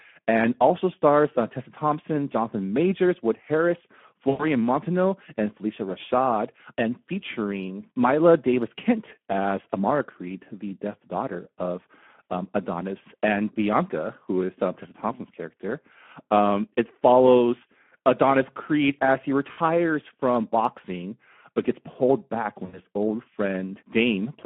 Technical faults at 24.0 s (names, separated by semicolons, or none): Speex codec